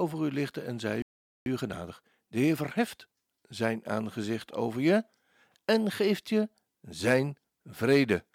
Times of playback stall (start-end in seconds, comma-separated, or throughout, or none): 1.02-1.46